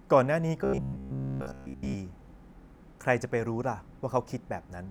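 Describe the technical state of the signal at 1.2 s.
At 1.2 s there is robotic sound from repeated short buffers, from 0.65 to 1.95 s. The speech becomes a rigid buzz at 66.7 Hz, likely from a 15 ms slice replayed over skipped audio. That fixed pitch sets it apart from warbling codec artefacts.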